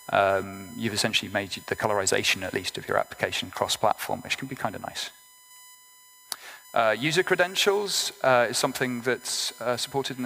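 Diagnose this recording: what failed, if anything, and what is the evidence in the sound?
A steady, fixed-pitch whine sits under the sound for the whole recording, built on 1 kHz with its harmonics and loudest at 7 kHz, roughly 25 dB below the signal. This is USB whine, a fault in the analogue wiring stage: the USB bus pulls current in 1 ms frames, and that periodic load leaks into the audio through shared power or ground, stamping a 1 kHz tone and its multiples onto the audio.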